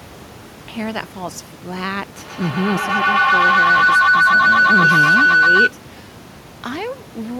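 At 2.17 s a feedback howl begins in the speech. Two devices in the same room are likely sharing the call. Sound leaves one loudspeaker and reaches the other microphone. Each trip round the loop adds level, so the repeats grow instead of dying away. They narrow to a tone near 1.5 kHz. The loop's delay is about 150 ms. At its peak it sits about 11 dB above the speech. It stops at 5.78 s. Room noise about 13 dB below the speech sits underneath throughout.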